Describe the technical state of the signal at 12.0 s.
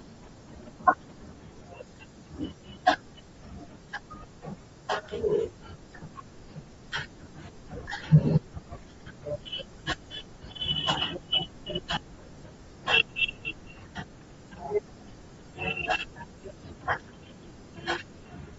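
Just before 12.0 s, at 11.96 s, there is a lost LE Audio frame: about 10 ms of audio, which fits a single 10 ms frame, never arrived. The decoder filled the hole by repeating the previous frame's spectrum with randomised signs, so the speech briefly blurs into a short noisy smear instead of dropping to silence. That sets it apart from an ordinary dropout or click. Because only one frame is missing, the concealment never fades down.

Across this moment and the whole clip, the speech also has a breathy, grainy edge that is plainly audible. This is likely Bluetooth LC3 compression, working in 10 ms frames at a low rate that fits about 32 kbps. Much of the upper spectrum is zeroed and refilled with shaped noise. The highs therefore sound hissy and textured rather than simply dull, which distinguishes this from a plain low-pass filter.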